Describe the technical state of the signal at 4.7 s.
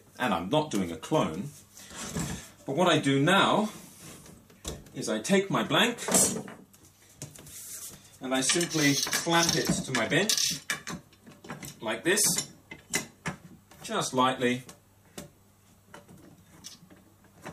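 At 4.7 s the signal is intact, with no dropout, distortion, clipping or other fault audible at that moment.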